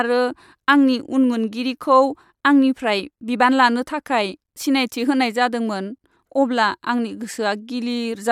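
No technical faults are audible.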